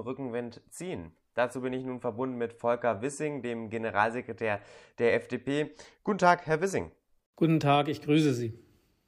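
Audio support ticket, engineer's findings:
Engineer's findings: no audio faults found in the speech recording for this support ticket.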